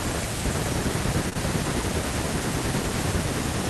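At 1.29 s and again at 1.33 s, running to 1.37 s, there are two back-to-back bursts of short concealed packet loss. Each time, about 20 ms of the speech failed to arrive at the decoder in time, and the receiver papered over the gap by extending the preceding sound, roughly 20 ms of fill the first time and 13 ms the second, before crossfading into real audio. The result is a brief smeared wobble where a short sound can drop out.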